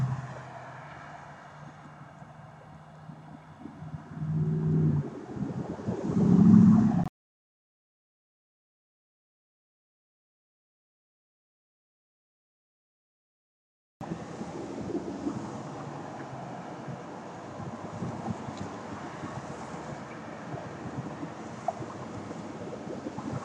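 Nothing stood out as a technical problem on listening.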